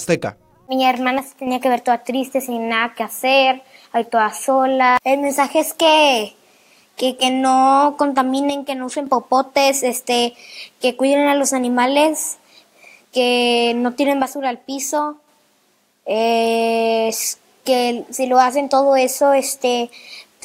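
At 1.19–1.47 s, 8.50–9.07 s and 14.22–15.28 s the sound dips abruptly by about 6 dB, likely one channel drops out; the waveform shows sharp-edged steps down.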